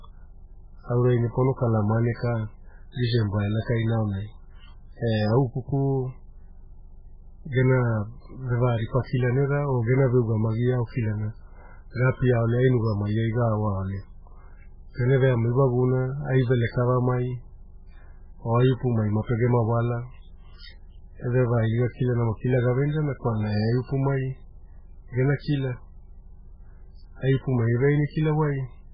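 Across the whole recording the speech sounds dull and watery, with nothing above about 5.2 kHz, so s sounds lose their edge and turn into swirling, metallic chirps while consonant onsets smear. This is likely MP3 compression starved of bits. The damage is heavy enough to fit a very low bitrate around 8 kbps. The encoder has cut the treble at a fixed point and dropped weak frequency lines that flicker on and off between frames.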